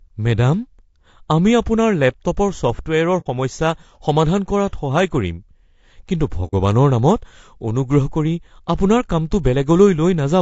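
Throughout, the speech sounds rough and grainy, with noise between harmonics and a dulled top band, likely low-delay AAC compression at a rate near 32 kbps. At 3.20–3.27 s, just before "সমস্যা সমাধান কৰাত", and at 6.47–6.54 s, AAC frame loss with muting leaves soft-edged holes of about 60 ms, consistent with two zeroed frames each.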